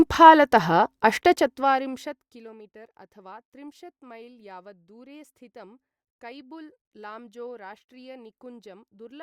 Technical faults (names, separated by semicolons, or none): zipper noise